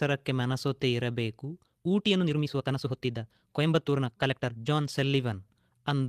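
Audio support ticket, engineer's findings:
Lost packet rebuilt from error correction, 0.51–0.53 s: brief rough, noisy patch with no dropout, which fits one 20 ms frame replayed from Opus in-band FEC. Unlike concealment, there is no gap and no smeared, repeated tone.

Time-stretched section, 1.59–4.99 s: pace abruptly 1.47x faster, rushed, pitch unchanged. Likely a software time-stretch dropping short segments; a resampling speed-up would raise the pitch.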